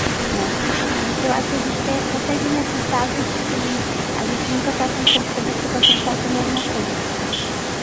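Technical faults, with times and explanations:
Throughout: echo leak. A distinct second copy of the speech trails the original by about 0.76 s, only a little quieter, likely because a loudspeaker's echo canceller let its microphone pickup through. Unlike room reverberation, it is a separate delayed repeat, not a smooth decaying tail.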